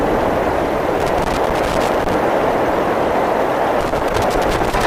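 From 1.00 to 2.14 s, and again from 3.81 to 4.84 s, loose connector crackle breaks into the sound as irregular scratching bursts. A worn or dirty contact is intermittently making and breaking, chopping the signal and adding pops where DC sits on the line. Unlike digital dropouts, which arrive as clean, evenly shaped gaps, these bursts are ragged and uneven in spacing and level, like a jack being wiggled.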